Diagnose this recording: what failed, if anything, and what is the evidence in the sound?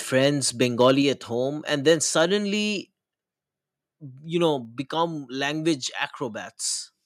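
Harsh, crackling edges on the loudest syllables at 0.21–0.27, 0.62–0.92, 1.88–1.92 and 2.19–2.22 s. This is likely microphone overload at the converter, with peaks about 2–4 dB past its limit and their tops sliced off.

Speech and background drop abruptly at 1.02 s (about 4 dB), then at 2.04, 3.06 and 4.65 s (about 2 dB each). This is likely call processing stepping the microphone volume down in response to the clipping.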